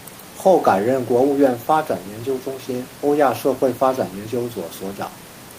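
Nothing stood out on listening to the speech, apart from a faint room noise sitting about 24 dB below it, which belongs to the recording space rather than the system.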